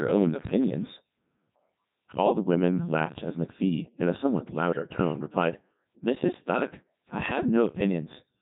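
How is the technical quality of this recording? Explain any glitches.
The technical quality is poor: the whole recording has been through a very low-rate digital voice codec, and two short bursts of transmission errors break it further.

Throughout, the speech carries heavy Codec 2 vocoder damage, with the buzzy, robotic timbre that fits Codec 2 at its 3.2 kbit/s mode. Only pitch, voicing, loudness and a coarse spectral envelope survive the link. The decoder then rebuilds the voice from sine waves, so the original waveform is gone. On a spectrogram the harmonics look unnaturally regular and smeared, with blurred fine detail between them. The waveform looks synthetic rather than like natural speech.

At 0.41 to 0.50 s and again at 4.73 to 4.82 s, bit errors on digital voice radio produce brief bleeps and warbles, and the synthetic voice lurches in pitch, level and tone colour. At this low bitrate each flipped bit changes the parameters of a whole frame, so even a small error rate corrupts several frames. 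The error rate is a couple of percent in the first burst and around five percent in the second. A spectrogram shows abrupt harmonic jumps and odd tonal blips, and the waveform shows sudden envelope steps.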